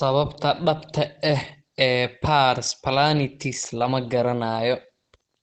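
From the start the speech is muffled and hoarse, with an audible codec roughness. On a spectrogram everything stops at a hard ceiling near 8.8 kHz. This is likely Opus compression in its speech (SILK) mode at a low bitrate around 16 kbps.

From 0.50 s to the end, pre-emphasis is left on: a treble boost was applied and the matching cut never was, lifting highs by about 11 dB at 10 kHz relative to 1 kHz, which fits a 50 µs FM curve. The sound turns thin and sibilant. The spectrogram's upper band brightens from 0.50 s, and the waveform grows spikier.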